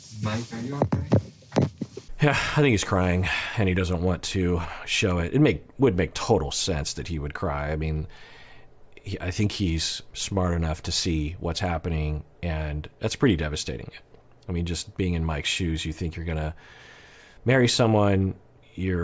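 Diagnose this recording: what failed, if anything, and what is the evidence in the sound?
No failure is audible at any stage of this recording.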